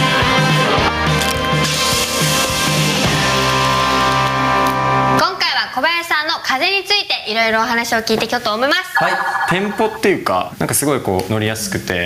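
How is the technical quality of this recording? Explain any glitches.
The recording has one clear problem, gain pumping, running through the whole clip. The level swings by about 15 dB, leaving everything squashed. The gain was likely set far too high, with a fast limiter clamping down on each peak.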